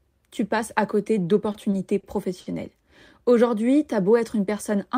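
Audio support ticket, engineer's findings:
Short stall from a late packet, four times: 1.52 s and 1.70 s, both just after "tu passes à côté", then 2.00 s and 2.41 s. Speech held and stretched by 20, 20, 30 and 50 ms, with a slight buzz or dip on the hold. Component: receiver jitter buffer. It ran dry when packets arrived late, and the last sound was extended until each packet arrived. Playback resumes at the same point. No speech lost. Latency grows by each stall's length.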